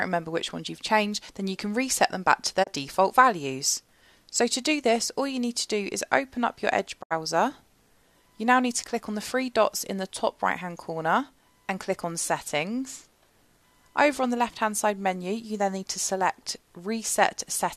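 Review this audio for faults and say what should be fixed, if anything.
Digital broadcast dropout at 2.62–2.69 s and 7.01–7.13 s: the receiver muted with a 20 ms fade when frames failed. The gaps fit roughly one and three lost frames, about 24 ms and 72 ms of programme. To prevent this, improve reception margin or add error protection.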